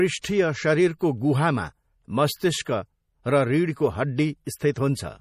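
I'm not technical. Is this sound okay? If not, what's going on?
No, there are two problems, and both come from squeezing the recording down to a small file.

The first runs through the whole clip and sounds like MP3 compression. Nothing is left above about 15.1 kHz, so the crisp top end of the speech is gone. The damage is easy to hear. The encoder likely ran short of space and threw away quiet detail, and the pieces it dropped change from one instant to the next. That makes the voice sound watery or swirly, with a metallic edge on s sounds. A plain dull or muffled recording would lose its treble smoothly and would not have that shifting, bubbly quality.

The second problem is pre-echo, a short hiss that comes just before a sharp sound instead of after it. It happens at 0.99 to 1.01 s, 2.62 to 2.66 s, 4.45 to 4.47 s, 4.58 to 4.61 s and 4.74 to 4.76 s, and each one lasts about 20 to 36 milliseconds. 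The squeezing works on short blocks of sound. When a sudden attack lands late in a block, the noise meant for the loud part spreads back into the quiet moment before it, so the attack comes out soft and smeared. An ordinary echo or room reverb always trails after a sound, never in front of it.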